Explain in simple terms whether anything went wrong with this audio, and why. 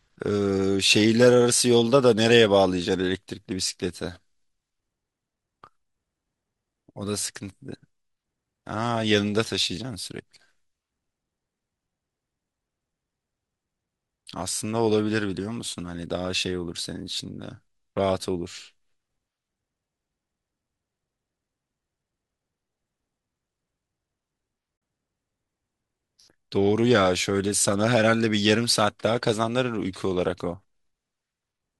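At 24.77 to 24.82 s, a few blocks of the compressed audio never reached the decoder, which replaced them with silence. This is AAC frame loss with muting. The sound fades out and back in over about 50 ms, leaving a soft-edged gap. The faint graininess throughout is likely from low-delay AAC compression.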